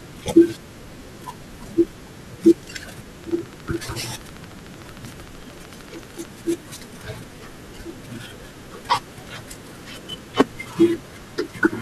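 From 3.24 to 6.26 s, a train of clicks, likely interference, ticks regularly at 13.3 per second: about forty spikes, evenly spaced vertical spectrogram lines.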